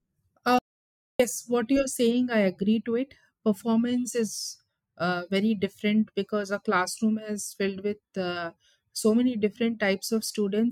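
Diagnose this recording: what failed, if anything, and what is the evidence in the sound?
Early in the speech, at 0.59 s, the sound cuts off mid-flow and returns at 1.19 s. The gap of about 0.61 s is dead digital silence with no room tone or hiss, and whatever was said in that stretch is simply missing. This is an audio dropout to silence, likely at the input stage: the capture device or its link briefly lost signal, or a mute engaged, while the recorder kept writing silence.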